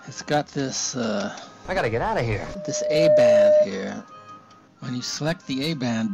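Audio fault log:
2.40 to 3.70 s, loudspeaker feedback squeal: a steady 605 Hz tone swells up over roughly 0.7 s and ends up around 10 dB above the rest of the sound. The mic is hearing its own loudspeaker, and at that one frequency the loop gain tops one, so it keeps feeding itself until the amplifier limits it or the loop gets broken.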